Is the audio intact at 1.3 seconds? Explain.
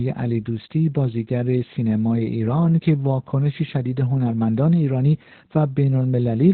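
No. Opus voice compression runs through the whole clip, so 1.3 s is affected like every other moment. The encoder is in its SILK linear-prediction mode with the band cut to narrowband, leaving nothing above 4.3 kHz, and the excitation is coded coarsely, which fits a bitrate around 8 kbps. The damage is heavy: the speech sounds muffled, hoarse and slightly robotic, with the crisp consonant detail missing.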